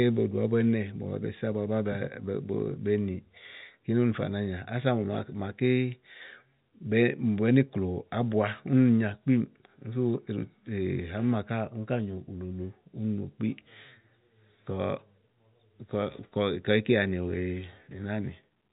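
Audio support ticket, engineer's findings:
No faults found: speech arrives through the G.711 telephone coding path as expected, with the band topping out at 3.8 kHz and the coding contributing at most a faint noise floor that tracks the signal level.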